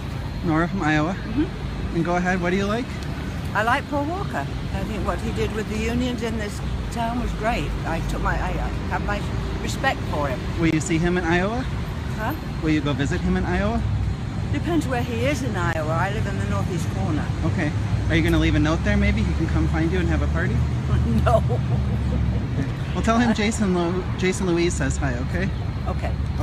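At 10.71 s and again at 15.73 s, a block of digital silence about 20 ms long replaces the sound. The audio drops abruptly to silence and returns with no fade, so each gap is heard as a short hole. On a waveform it appears as a flat line, and on a spectrogram as a blank vertical stripe.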